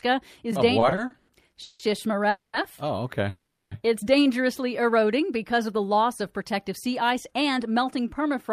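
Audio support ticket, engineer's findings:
Repeated stalls (stutter), 0.79–1.81 s: six stalls, about 360 ms filled in total, longest 170 ms, roughly a third of the span. Jitter buffer repeatedly ran dry and receiver extended the last sound each time. Nothing lost, but speech drags and stutters.

Call audio freeze, 2.29–2.55 s and 3.29–3.73 s: last sound held, fading to about 30 ms and 10 ms of silence, then resumes where it stopped. About 240 ms and 420 ms of gap inserted. Likely packets delayed in transit, emptying the jitter buffer.

Jitter buffer speed-up, 6.54–8.50 s: speech runs at 103% speed, pitch unchanged. Receiver trimming pitch-period-sized pieces to drain an overfull buffer, around 70 ms removed in total.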